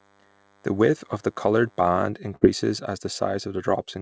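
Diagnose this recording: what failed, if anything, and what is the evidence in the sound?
Analogue wiring picked up a nearby DECT cordless phone buzz: its 10 ms radio bursts were rectified, giving a thin 100 Hz buzz with harmonics, faint beneath the speech, from 0.00 to 2.10 s.

At the network stage, a burst of packet loss hit at 2.36 to 2.43 s. The receiver stretched and faded the last sound for about 52 ms, then resumed with 60 ms of speech gone.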